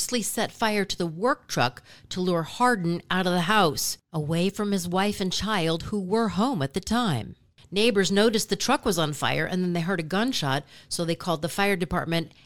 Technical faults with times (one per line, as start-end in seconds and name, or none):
none